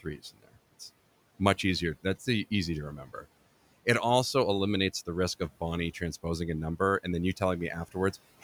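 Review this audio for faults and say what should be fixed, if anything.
Speech cut by the noise suppressor occurs from 0.03 to 0.55 s, about 17 dB down, and from 3.05 to 3.25 s after "easy to", about 10 dB down. Quiet speech was treated as noise and dimmed rather than fully silenced as in a dropout. A gentler suppression threshold would prevent it.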